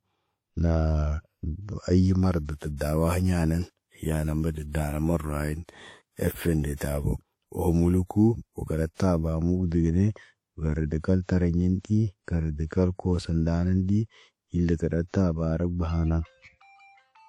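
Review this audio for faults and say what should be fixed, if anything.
The whole clip has plainly audible damage, most likely from WMA compression. The speech rings and sounds washy, with a hiss that breathes with the signal. It fits an older WMA encoder at a bitrate around 48 kbps. A spectrogram would show blocky, smeared energy and nothing above 19.1 kHz. Prevent this by encoding at a higher bitrate or with a modern codec.

Pre-echo occurs at 2.45 to 2.49 s, 6.75 to 6.81 s, 8.94 to 9.00 s and 11.79 to 11.85 s. Quantisation noise spreads 45 to 59 ms ahead of sharp attacks and softens them. On the waveform, each onset is preceded by a short band of noise. Prevent it with an encoder that switches to short blocks on transients.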